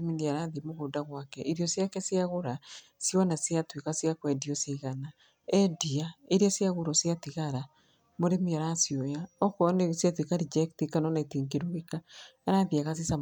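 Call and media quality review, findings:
No faults heard in this speech recording.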